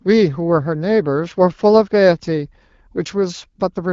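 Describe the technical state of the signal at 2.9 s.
At 2.9 s the speech is intact, with no fault present, only the wideband AMR coding at 12.65 kbit/s, which at that rate keeps the speech clear.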